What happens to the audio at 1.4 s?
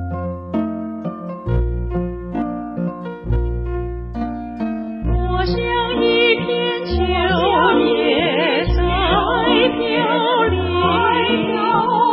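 Nothing goes wrong at 1.4 s; the audio plays through that moment intact, with no dropout, click or other fault.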